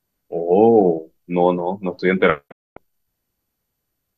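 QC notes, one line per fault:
2.50–2.78 s, digital broadcast dropout: the receiver stopped getting usable frames, either because the signal was lost or because frames failed their checksum, so it muted until valid data returned. The speech fades out over about 20 ms, leaves a gap of about 240 ms, then resumes further along in the programme. The gap fits a run of about ten lost frames of roughly 24 ms each. The audio sent during the gap is gone.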